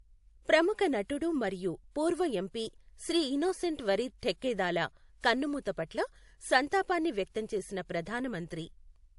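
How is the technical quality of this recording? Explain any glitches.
The recording is compromised by stacked lossy-coding damage running from start to finish.

Transcoding between lossy codecs, throughout: the speech sounds as if it was likely encoded with one lossy codec and then re-encoded with another, with the second codec spending its bits on the first one's smearing instead of on the signal. Nothing is present above 11.2 kHz. The different codecs' artefacts are heard together, and the mixture points to a low-rate MP3 followed by WMA.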